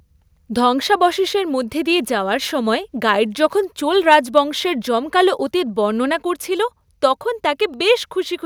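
Microphone overload appears from 4.12 to 4.15 s, right after "সময় গাইড যখন চোল". For those few hundredths of a second the loudest peaks push about 2 dB past full scale, and their tops are sliced flat at the converter's ceiling, with only a small fraction of samples, around 3 percent, affected. The squared-off waveform adds a brief harsh, crackly edge to that syllable, likely because the input gain was set too high for the louder speech.

A block of digital silence lands at 7.74 s, just after "করছিল তখন". For about 0.48 ms the audio drops straight to zero and then jumps back, with no fade on either side. Such a tiny gap is too short to hear as a hole. Instead it comes across as a tick or dip, the kind of dropout left when output samples are briefly replaced by zeros rather than real signal.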